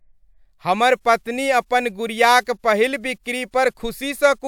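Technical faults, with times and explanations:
No technical faults are heard in this speech clip.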